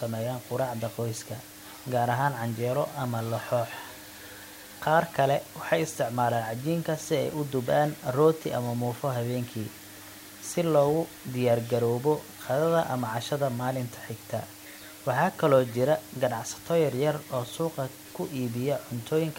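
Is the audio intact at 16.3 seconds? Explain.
No. At 16.3 seconds, as throughout the whole clip, the speech carries low bit depth with dither: only 7 bits, with dither added before rounding, so the quantisation error becomes a steady white hiss sitting only about 20 dB below the speech, with no distortion.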